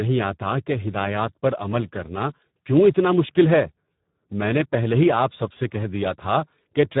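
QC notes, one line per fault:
Throughout: Speex codec damage, and it's heavy. The speech comes out hoarse and grainy, edging toward robotic, with nothing above 3.8 kHz, which fits a very low bitrate of about 8 kbps starving the CELP excitation so the coder guesses more than it encodes.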